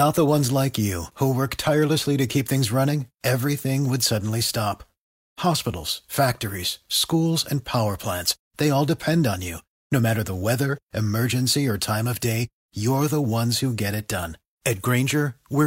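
No audible faults occur anywhere in this speech recording.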